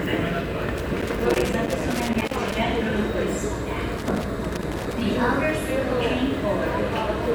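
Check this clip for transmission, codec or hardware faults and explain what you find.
One hardware fault appears twice. Loose connector crackle, 0.78–2.57 s and 3.97–5.01 s: a worn or dirty contact repeatedly makes and breaks, chopping the signal into irregular bursts of scratchy crackle.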